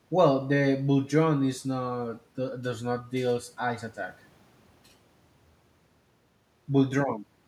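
Speech, with nothing technically wrong with it.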